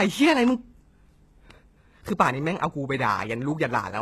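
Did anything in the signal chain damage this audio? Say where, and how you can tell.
Yes. Throughout the speech, s sounds are gritty and lispy, the treble has a metallic sheen, and nothing reaches above 12.3 kHz. This points to the codec stage, likely HE-AAC compression at a rate that fits 16 kbps, with treble rebuilt from copied lower bands.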